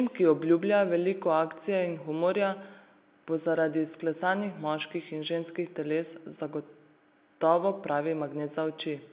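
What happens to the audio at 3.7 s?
Nothing goes wrong at 3.7 s: the speech there is intact, carrying only the narrow, sub-4 kHz band and faint level-following grain of ordinary mu-law telephone coding.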